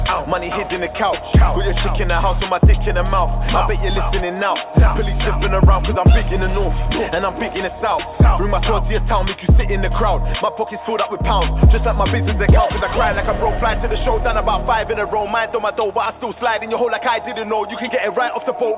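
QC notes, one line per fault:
Nothing stood out on listening to this clip.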